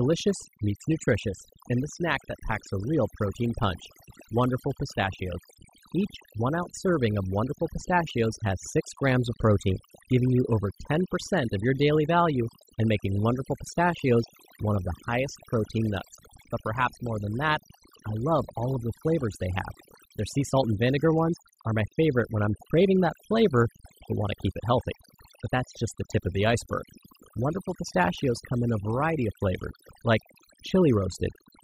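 Overdone noise removal runs through the whole clip. The noise reduction was set far too aggressively, so each frequency band near the estimated noise floor is pulled down hard. The background drops and breaks up into twinkling specks, and the speech loses its quieter components as they vanish.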